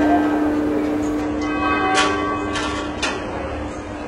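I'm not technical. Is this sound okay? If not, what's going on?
No. At 1.21 s the stream switched to a lower-bitrate version, as adaptive streaming does when a connection slows, and it stays there to the end. The change is sudden, with no gap. The highest treble is cut off and compression artefacts become more audible.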